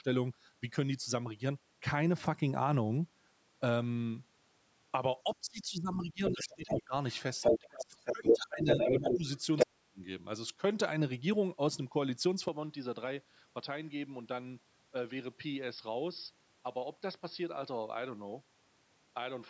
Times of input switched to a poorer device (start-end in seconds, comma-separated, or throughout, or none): 12.48-19.50